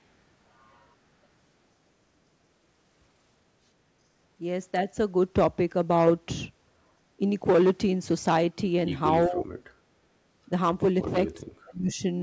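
At 9.27 to 9.43 s the speech dips briefly, then from 11.38 to 12.02 s it drops much deeper, nearly cutting out. Both look like speech suppressed in double talk: the echo canceller likely could not separate the talker from the overlapping loudspeaker echo and turned the talker down.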